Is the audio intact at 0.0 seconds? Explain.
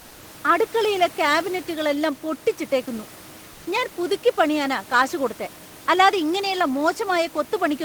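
No, not quite. From 0.01 to 0.19 s the real room background is replaced by comfort noise, which is likely the sender's discontinuous transmission kicking in: with no speech detected, it stops sending audio and the receiver fills the gap with synthetic noise roughly matched to the background. For those 180 ms you get a flat, featureless hiss, about 1 dB quieter, sitting about 25 dB below the loud parts, instead of the natural room noise with its detail.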